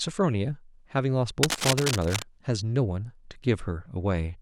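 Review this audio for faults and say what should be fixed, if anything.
Cable scratch noise runs from 1.43 to 2.24 s, a rough rustling burst not far below the speech, likely a worn connector shifting contact as the cable moved. Reseat or replace that cable and keep it still while recording.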